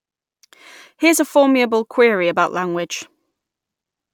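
No technical faults can be heard anywhere in the speech.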